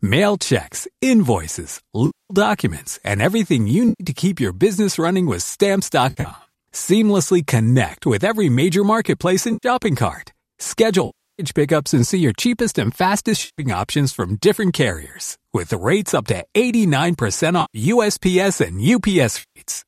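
Speech breaks up repeatedly through AAC frame loss with concealment. Gaps fall at 2.06 to 2.34 s (240 ms lost), 3.89 to 4.04 s (110 ms), 9.53 to 9.67 s (100 ms), 11.06 to 11.43 s (330 ms), 13.45 to 13.62 s (130 ms), 17.61 to 17.78 s (130 ms) and 19.39 to 19.60 s (170 ms). From 6.10 to 6.50 s, 250 ms of loss is scattered in short bursts, the longest roughly 70 ms. In each gap the decoder keeps repeating the last good spectrum with jumbled detail. The sound turns smeared and noisy. The codec is likely low-delay AAC, with only light grain.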